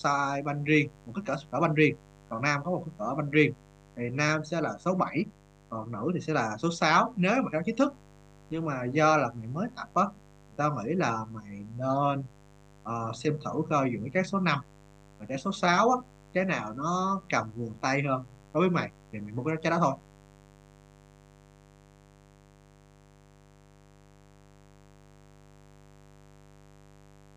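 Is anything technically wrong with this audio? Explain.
Yes. A mains buzz runs through the whole recording. Something in the signal chain, such as a dimmer, a rectifier or a missing shield, is letting sharp switching spikes from the 50 Hz supply into the audio, twice per mains cycle. Those spikes carry harmonics of 50 Hz far up the spectrum, into the kilohertz range. The result is a steady, raspy buzz under the speech, roughly 30 dB below it.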